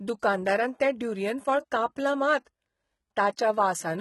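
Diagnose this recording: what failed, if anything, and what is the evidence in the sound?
Codec stage: across the speech, s sounds turn gritty and metallic, with nothing above 11.8 kHz. This is likely HE-AAC compression, heavily damaged, fitting a bitrate near 16 kbps. Spectral band replication copies lower bands upward, so a spectrogram shows repeated, misaligned treble patches under a hard 11.8 kHz ceiling.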